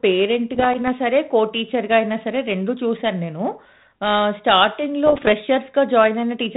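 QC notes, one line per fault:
0.54–0.89 s and 5.06–5.31 s: bit errors on an ADPCM link. Pops and rough bursts with brief level jumps, denser in the second run. Flipped bits in the 32 kbit/s G.726 stream, under half a percent then about one percent, knock the decoder's step size and predictor off, so each error rings for milliseconds.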